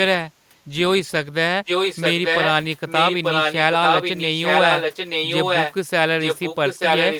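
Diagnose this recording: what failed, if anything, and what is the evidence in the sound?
Echo leak, at the call-processing stage: a delayed copy of the speech, about as loud as the original and trailing it by 885 ms, runs from 1.66 to 2.51 s, 2.88 to 5.74 s and 6.2 s to the end. This is likely a far-end echo canceller failing to subtract loudspeaker pickup.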